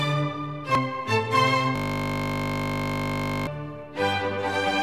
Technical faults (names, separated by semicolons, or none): damaged data in a compressed stream; system hang loop